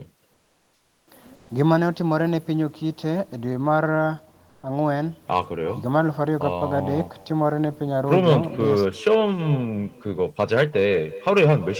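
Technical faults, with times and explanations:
Throughout: echo with no canceller. Everything spoken returns about 300 ms later as a quieter copy, about 19 dB below the speech, and thin. The far end's loudspeaker feeds its microphone, and nothing removes that loop before the sound travels back.
0.33 to 1.07 s, 1.35 to 1.49 s and 4.49 to 4.63 s: comfort noise in place of the background. In these pauses the real background gives way to a smoother, synthetic noise. It is about 3 dB quieter in the first two and about 1 dB louder in the third. The likely cause is the sender pausing transmission in silence, with the receiver filling in synthetic noise.
5.31 to 5.39 s, 8.12 to 8.36 s, 8.77 to 9.15 s and 10.4 to 11.79 s: hard clipping. Peaks exceed what a stage can pass, overdriven by about 3, 5, 4 and 6 dB. Their tops are cut flat, adding high harmonics. The result is harsh crackle and fuzz, strongest in the final stretch.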